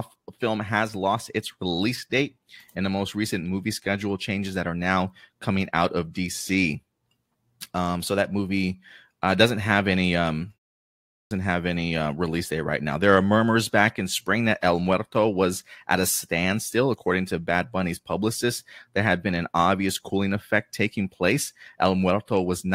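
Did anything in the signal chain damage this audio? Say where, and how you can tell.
Yes. At playback, the output device shows a clipped start after a pause: at 11.02 s, after a pause of about half a second, the sound re-enters abruptly with its opening missing, and roughly 290 ms is swallowed before audio resumes at 11.31 s. The device appears to drop into a low-power or unlocked state during the silence and needs that long to wake and resynchronise, so the first part of the returning sound is never output.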